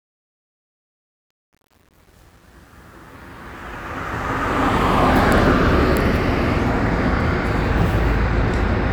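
From the start to about 5.36 s, the fade-in carries truncation distortion on a fade. The gain stage dropped low-order bits without dither, leaving the rising signal on a coarse staircase consistent with roughly 9-bit resolution. Between 0.0 and 4.32 s, where the level is lowest, the sound is gritty. The distortion eases as the fade-in climbs and ends at 5.36 s.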